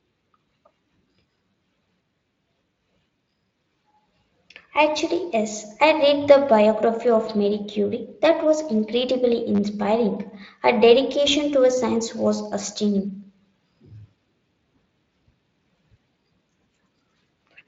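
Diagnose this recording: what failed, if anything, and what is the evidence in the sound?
The playback buffer ran dry at the driver or buffer stage, so the device played its last block again, a repeated buffer. At 1.51 to 1.53 s and 9.55 to 9.59 s the same tiny slice sounds several times with hard joins, heard as a brief buzz-like stutter. The repeat period fits a 10 ms buffer.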